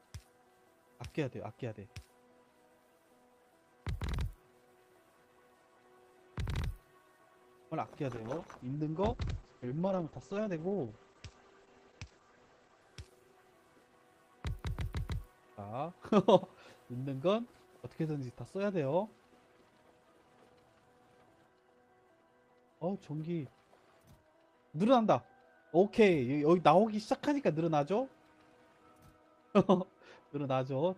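From 8.12 to 13.89 s a call bitrate drop starves the encoder of bits, which fits a fall from 32 to 10 kbps. Bandwidth shrinks from 20 kHz to 8 kHz, leaving the sound muffled and coarse for about 4.5 s before recovering.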